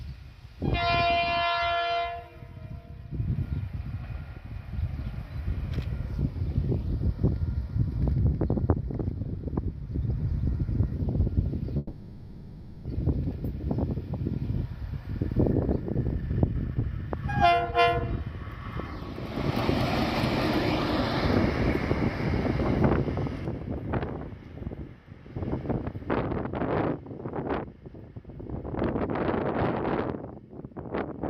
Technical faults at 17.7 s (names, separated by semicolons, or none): jitter buffer speed-up